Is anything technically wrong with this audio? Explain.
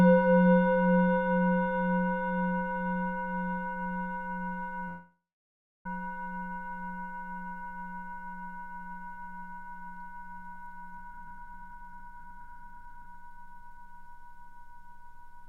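Yes. From 4.88 to 5.86 s there is a call audio freeze, likely caused by packets stalling in transit until the jitter buffer emptied. The receiver extends the last sound into a fading buzz, then holds near-silence for about 0.67 s. About 0.97 s is inserted, nothing lost, and the sounds resume late.

From 10.97 to 13.95 s comes a jitter buffer speed-up. Excess buffered audio was trimmed by repeatedly cutting out pitch-period-sized slices, around a second in total. The sounds play at 132% speed without any pitch shift, so events feel rushed and crowded together.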